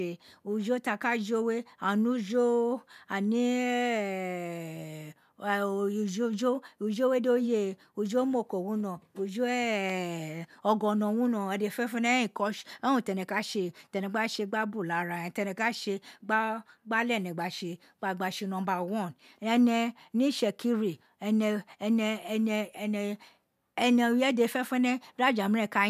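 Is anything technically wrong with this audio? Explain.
No, nothing stood out as technically wrong on listening to this speech recording.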